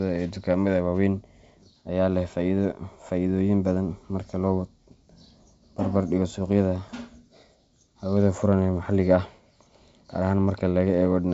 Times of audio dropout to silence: none

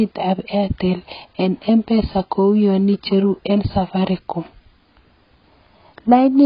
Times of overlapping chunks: none

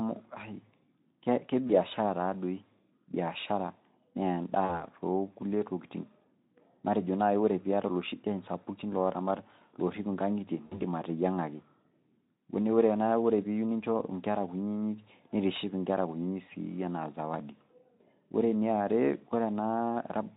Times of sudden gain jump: none

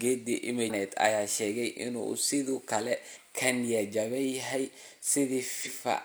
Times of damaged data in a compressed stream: 0.65-0.71, 3.11-3.16, 5.62-5.68

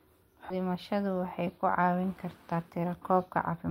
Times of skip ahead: 0.50

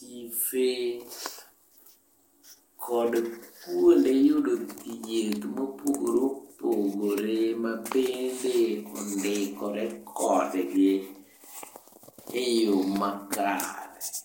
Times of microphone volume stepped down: none

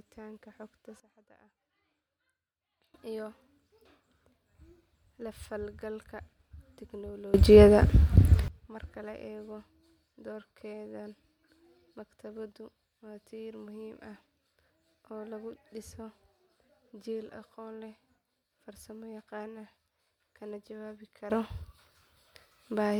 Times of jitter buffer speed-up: none

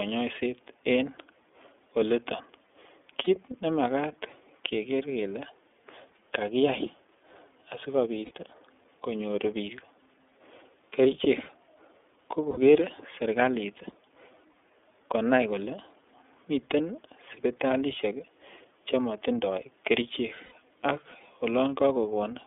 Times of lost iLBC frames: 3.24-3.28, 8.25-8.31, 12.51-12.57, 14.52-14.55, 20.45-20.53

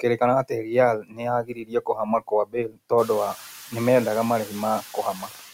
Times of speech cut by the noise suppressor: 1.01-2.91

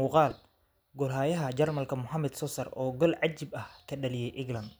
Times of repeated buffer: 0.31

